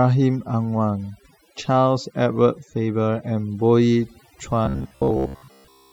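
Overdone noise removal affects this speech clip from start to finish. The noise reducer was set so aggressively that frequency bands it judged close to the noise floor were pulled far down or cut entirely, taking the softer parts of the voice with them. Between phrases the background drops to near silence scattered with twinkling specks. Robotic sound from repeated short buffers takes over from 4.66 s to the end at 5.92 s, with the voice collapsing into a rigid metallic buzz at about 67 Hz that still loosely tracks the speech. The likely cause is audio arriving too infrequently, so the software keeps replaying the most recent fragment of roughly 15 ms instead of playing new material. For most of this stretch the sound is made of these repeats, and the genuine audio in between is skipped. That fixed repetition period is what imposes the steady buzz pitch.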